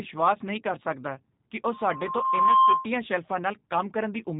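G.729 codec damage runs throughout the speech, plainly audible. The sound is rebuilt from a vocal-tract filter, a pitch predictor and a few pulses per frame, which fits an 8 kbit/s stream. The speech comes out rough and synthetic, with nothing above 3.8 kHz.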